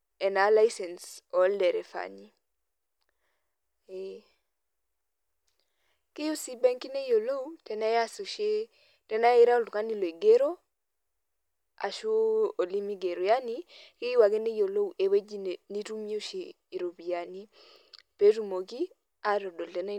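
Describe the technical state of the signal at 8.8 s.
At 8.8 s the speech signal is intact, with no fault present at that moment.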